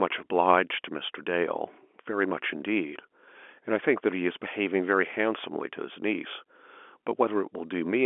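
Nothing stood out on listening to this speech, which carries the narrow 250 to 3400 Hz band of an ordinary G.711 telephone line.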